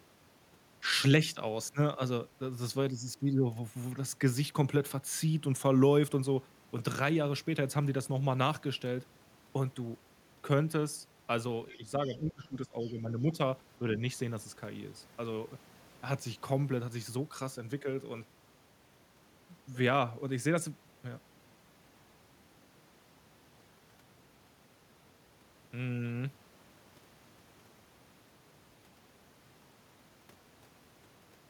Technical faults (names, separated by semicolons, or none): speech suppressed in double talk; other side's voice leaking through